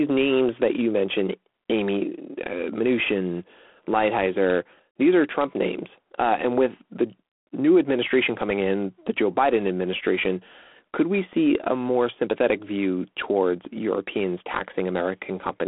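Throughout, G.726 ADPCM's coarse difference coding leaves a rasping hiss riding the speech level, suggesting 24 kbit/s. Spectrograms show grainy noise and nothing above 3.8 kHz.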